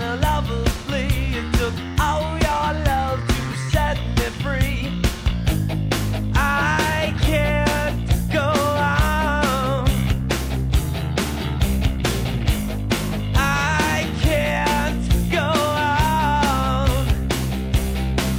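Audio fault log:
throughout, sample clock jitter: the converter's clock wanders by around 2 microseconds, so steep parts of the waveform land at the wrong level, leaving a hiss roughly 35 dB below the sound that swells on loud, bright passages. Spectrograms show a broadband haze tracking loudness, gone in gaps.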